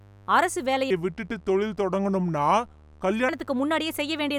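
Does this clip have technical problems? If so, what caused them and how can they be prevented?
Yes. A mains buzz runs through the whole clip, sitting roughly 25 dB below the speech. Its 50 Hz fundamental carries a stack of harmonics reaching well into the kilohertz range, because sharp switching spikes from a dimmer, rectifier or unshielded cable enter twice per mains cycle. That rasp separates it from a plain hum, which would be a smooth, low tone with few overtones. To prevent it, use shielded, balanced cabling and keep the recording chain away from dimmers and cheap power supplies.

From 0.90 s to 3.29 s, just after "அரசு வேலைய", a section at the wrong speed plays back at 0.753 times its recorded rate. The speech drags and drops about five semitones, so it sounds deep and slow. Pitch and tempo shift together and snap back at 3.29 s, which tells it apart from pitch-shifting or time-stretching, where only one of the two would change. 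The likely cause is an editor or player that treated this stretch as if it ran on the wrong clock. To prevent it, check that every segment's sample rate matches the project before export.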